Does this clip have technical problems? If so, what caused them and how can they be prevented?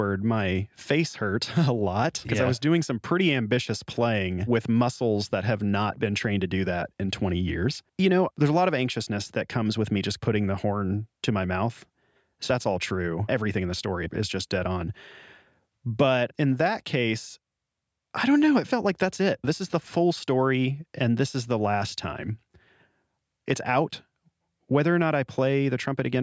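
No, nothing in this speech recording stood out as a technical problem on listening, so there is nothing here that needs preventing.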